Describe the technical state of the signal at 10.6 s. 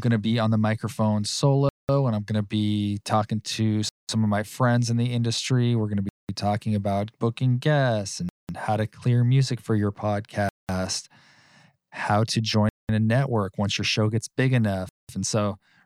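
At 10.6 s the signal sits inside a gap between chunks, a hole of silence running from 10.49 to 10.69 s, about 200 ms, just after "clear music for your". The audio was delivered in blocks of roughly 2 s, and at this join dead air was left between them. Nothing is dropped; the speech stops abruptly on a hard edge and resumes intact after the silence.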